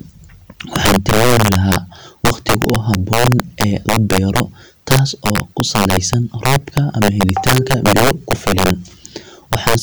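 Violent, sharp cracks burst out of the louder moments of this speech clip throughout, far harsher than ordinary clipping. It is integer overflow: the signal was pushed about 9 dB too hot, and the roughly two percent of samples exceeding the maximum wrapped to the opposite sign instead of being limited.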